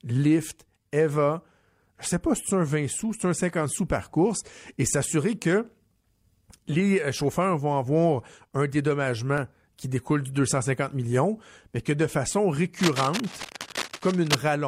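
From 12.79 to 14.37 s, just after "mais que de façon", cable scratch noise rustles over the speech. It is fairly loud against the voice, most likely from a worn connector or cable being moved. On a spectrogram it appears as dense, ragged broadband specks, and on the waveform as uneven spiky bursts.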